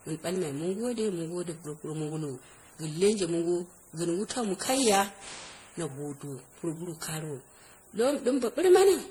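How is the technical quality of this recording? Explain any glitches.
The recording has one problem running through the whole clip: generation loss. The speech sounds swirly, smeared and hollow, with blurred consonant attacks. The likely cause is repeated MP3 re-encoding at 64 kbit/s, around ten passes, each re-quantising on a shifted frame grid so noise and spectral holes pile up.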